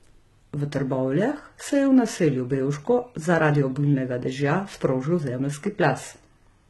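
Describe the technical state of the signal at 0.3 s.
HE-AAC compression is present at 0.3 s, as it is across the whole clip. The treble is likely rebuilt by spectral band replication: lower bands are copied upward under a coarse envelope, so the top end is not the original and its harmonics no longer line up with the speech below the crossover. The damage is heavy, pointing to a very low bitrate around 16 kbps. Sibilants turn gritty and metallic, and nothing reaches above 11.8 kHz.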